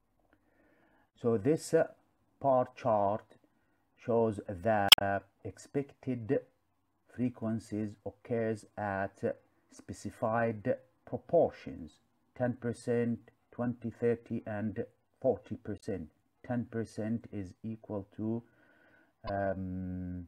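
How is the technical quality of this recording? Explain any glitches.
The recording has three short glitches, all from damaged data in a compressed stream. They occur at 4.87–5.02 s, 15.77–15.84 s and 19.27–19.30 s. Corrupted bytes make the decoder misread frames and lose sync until it finds a valid header. Each glitch is brief, heard as a chirp, squawk, click or short hole, with an abrupt discontinuity in the waveform.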